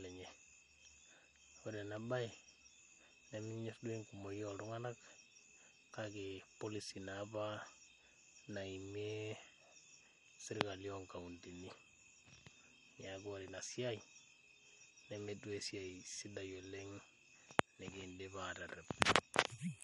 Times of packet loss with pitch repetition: none

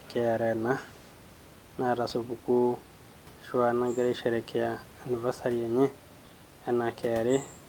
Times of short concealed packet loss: none

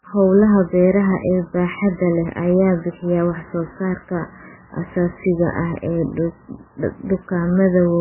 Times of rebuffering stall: none

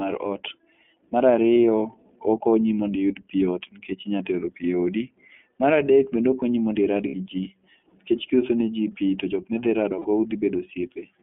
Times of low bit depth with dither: none

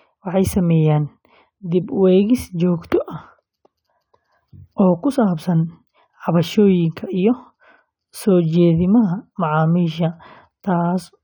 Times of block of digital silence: none

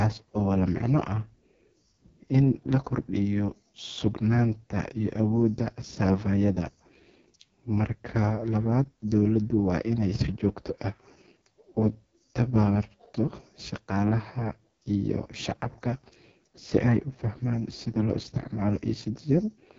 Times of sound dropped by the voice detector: none

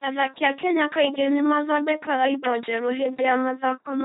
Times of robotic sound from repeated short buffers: none

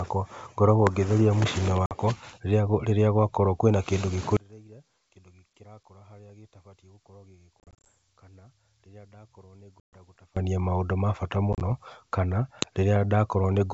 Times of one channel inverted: 4.37-10.37

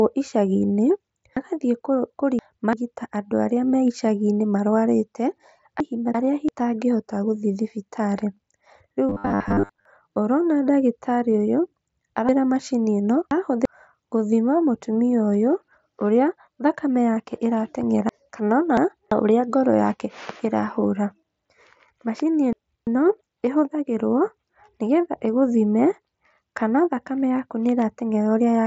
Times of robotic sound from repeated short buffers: 9.09-9.85

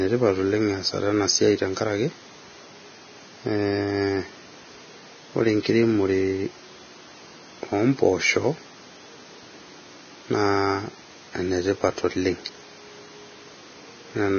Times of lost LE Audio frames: none

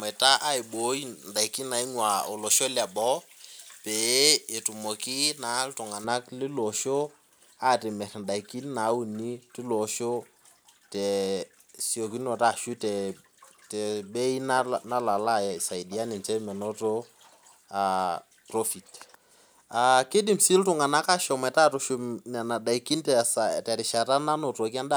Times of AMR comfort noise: none

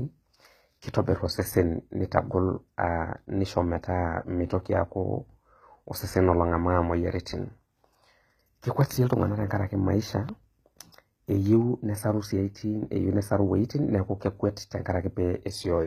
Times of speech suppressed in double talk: none

